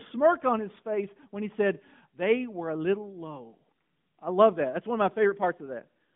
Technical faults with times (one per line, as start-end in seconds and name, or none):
0.00-6.15 AMR narrowband mobile codec